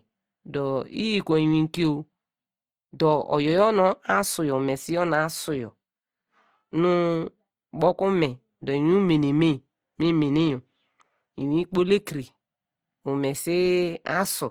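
From start to end, the speech carries plainly audible Opus compression damage, likely from encoding in the codec's music mode. The encoder keeps each band's energy but runs short of bits, so it fills the gaps with noise or folded copies of lower bands. Voiced sounds turn rough and grainy rather than swirly. The bandwidth stays full, reaching up to about 20.2 kHz. The roughness fits a rate near 24 kbps.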